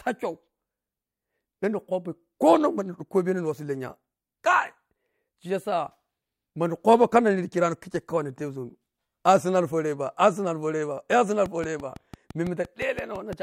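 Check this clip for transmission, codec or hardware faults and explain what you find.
A train of clicks runs from 11.46 to 13.34 s: about ten similar pulses at a regular 5.9 per second, peaking a few decibels above the speech. The likely cause is interference from nearby equipment or a struggling interface injecting repeated pulses. They tick through the audio and its pauses. On a waveform they appear as evenly spaced sharp spikes, and on a spectrogram as thin vertical broadband lines.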